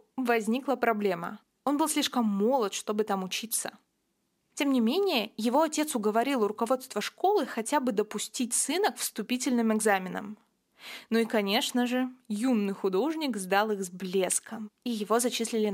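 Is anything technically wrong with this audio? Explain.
Yes. Crude rate conversion runs through the whole speech clip. Samples were repeated without filtering, which fits a 32 kHz to 48 kHz step. This leaves a gritty, inharmonic fizz roughly 20 dB below the speech.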